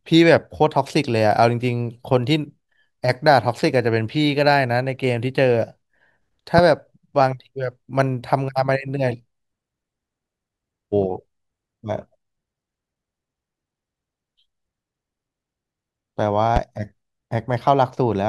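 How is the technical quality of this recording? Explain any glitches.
The recording is marred by two loud pops. A sudden voltage spike, likely from a plug, switch or static discharge, entered the signal path, and the following circuitry shaped it into a brief pulse. The result is a sharp pop at 6.58 to 6.61 s, roughly 15 dB above the speech, and a weaker one at 16.56 to 16.59 s, around 10 dB above, with the speech continuing underneath both.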